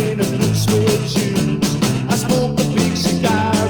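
No technical faults are audible.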